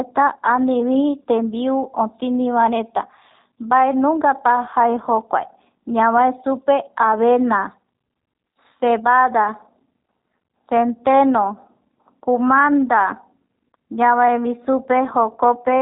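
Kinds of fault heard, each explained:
G.729 codec: The speech is rebuilt by a low-rate speech coder from a vocal tract filter, a pitch predictor and a few pulses per short frame, and the roughness and synthetic edge are plainly audible, consistent with an 8 kbit/s G.729-type codec. On a spectrogram nothing shows above about 3.8 kHz, leaving an empty band across the whole clip. Below it, harmonics look smeared and grainy. The waveform keeps its overall envelope, but its fine detail is lost.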